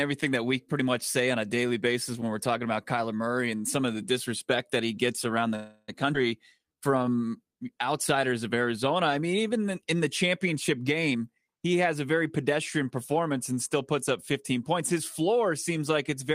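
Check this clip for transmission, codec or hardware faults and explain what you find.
Four packet-timing faults affect this speech clip: a freeze, a skip, then a slow-down and a speed-up.

From 5.55 to 5.90 s a call audio freeze stretches the last sound into a fading buzz for 327 ms, likely from delayed packets emptying the jitter buffer. Nothing is lost, unlike a skip.

At 6.14 to 6.16 s a skip ahead drops about a tenth of a second. The audio jumps forward almost without a gap rather than stalling.

From 6.59 to 7.50 s a jitter buffer slow-down repeats pitch periods, adding 128 ms. Speech plays at 87% speed with unchanged pitch, drawn out rather than frozen.

From 11.10 to 11.89 s a jitter buffer speed-up trims roughly 150 ms of pitch periods. Speech runs at 119% with unchanged pitch, sounding hurried rather than jumping.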